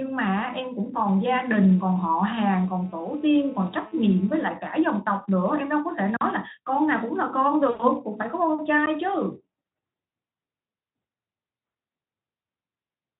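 From 1.51 to 4.46 s a GSM phone buzz sits under the speech. A 2G handset nearby is sending radio bursts about 217 times a second. The audio circuit rectifies those pulses into sound. The result is a hard, raspy buzz at 217 Hz, rich in harmonics. It stays nearly steady, as it does during a call. It sits about 27 dB below the speech and has no link to it.

At 7.69 s the speech breaks into VoIP packet loss concealed by the speech codec. About 100 ms of audio went missing, which fits five 20 ms frames. The speech decoder fills the gap from its last pitch and filter settings. It lowers the gain with each frame. So the sound smears into a buzzy tone or coloured noise that fades. It runs until 7.84 s. The speech stays weak for a moment after packets return.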